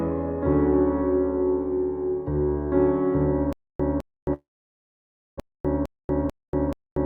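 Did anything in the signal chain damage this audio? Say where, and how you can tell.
Yes. From 3.53 s to the end of the clip at 7.06 s there is a stutter with silent gaps at the playback buffer stage. A 208 ms burst of the music repeats every 477 ms, separated by 269 ms of digital silence. This likely comes from a stalled player replaying its last fragment on each retry and then running empty.

From 4.33 s to 5.39 s there is a long network dropout. The receiver's concealment stretches the last sound into a fading buzz or hiss, followed by about 940 ms of silence, and roughly 600 ms of the music never returns. This is likely a network outage, with the delay shifting by around 400 ms.

From 5.47 s to 6.91 s a jitter buffer speed-up runs the music at 109% speed while the pitch stays unchanged, so the tempo audibly rushes. To drain its backlog, the receiver's jitter buffer cut out short pitch-period slices, about 150 ms in total.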